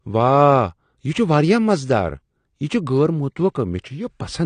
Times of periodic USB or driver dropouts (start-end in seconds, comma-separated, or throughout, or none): none